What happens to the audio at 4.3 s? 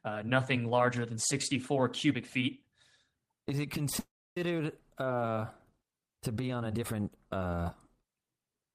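At 4.3 s the speech is inside a call audio freeze running from 3.99 to 4.37 s. The last sound is held briefly as a fading buzz or hiss, then drops to about 290 ms of silence. This is likely a delivery stall: packets arrived late, the jitter buffer ran dry, and the receiver concealed the wait. When the speech resumes it picks up exactly where it stopped, so nothing is lost, but everything after runs about 370 ms later.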